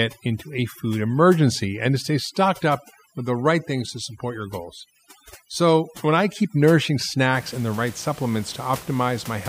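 From the start to about 7.35 s, overdone noise removal is at work: a noise reducer set far too aggressively switches off individual frequency bands wherever they sit close to its noise estimate, so quieter parts of the speech vanish along with the room noise, which otherwise sits about 21 dB below the speech. The background in the pauses drops and breaks up into twinkling artefacts. A spectrogram shows isolated, flickering specks in the gaps and holes punched into the harmonics.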